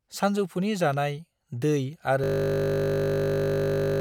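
A system hang loop runs from 2.24 s to the end: a frozen system replays one 20 ms buffer, producing a steady 50 Hz buzz.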